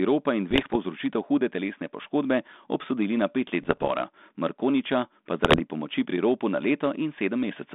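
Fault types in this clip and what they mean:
Bit errors on an ADPCM link: Flipped bits upset the decoder's step size and predictor. Three rough, popping bursts result, the first right after "ropa in".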